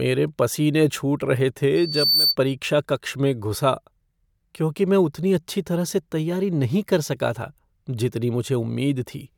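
From 1.75 s to 2.36 s there is loudspeaker feedback squeal: a single tone at 4.6 kHz that swells out of the speech over a little under half a second and settles somewhat louder than the talker. The microphone is picking up the loudspeaker it feeds, and at 4.6 kHz the loop gain exceeds one, so that frequency keeps reinforcing itself until the squeal drops away at 2.36 s.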